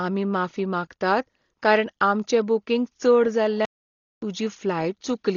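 From start to finish the speech sounds dull and rough, with nothing above 6.9 kHz and a fluttering noise around voiced tones. That is likely heavy Dolby Digital compression at a low bitrate, around 32 kbps, where starved frequency lines are filled with dither rather than simply cut. At 3.65 s, just after "बूकींग चड", a playback stall silences the output for 0.57 s until 4.22 s. The speech then resumes, and the gap likely comes from the player running out of data or its thread being blocked.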